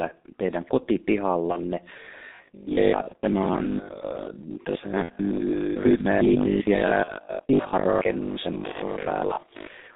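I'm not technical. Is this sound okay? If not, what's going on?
No, it isn't. Three problems are stacked on top of each other.

First, the whole recording has been squeezed through the G.723.1 codec, an old internet-phone voice format. It throws away everything above about 3.7 kHz and everything below about 200 Hz, and it compresses the voice heavily. That's why the speech sounds muffled and hoarse from start to finish, with consonants smeared together.

Second, there are short dropouts where bits of the call went missing in transit. This is VoIP packet loss concealed by the speech codec. At 1.52, 3.08, 7.04 and 8.72 s, about 30 ms of sound vanished. At 5.03 s, about 60 ms went missing. Each time, the decoder guesses by stretching what came just before, so you get a brief, fading smear, and the voice stays weak or distorted right afterwards.

Third, from about 2.0 s to the very end, the voice has a rigid, metallic buzz, a robotic sound from repeated short buffers. 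Most of the sound in that stretch is tiny slices being replayed instead of new audio. The buzz sits at 50 Hz, which means the same 20 ms chunk keeps repeating. That's likely caused by audio arriving too slowly to keep up, so the software fills the gaps with repeats.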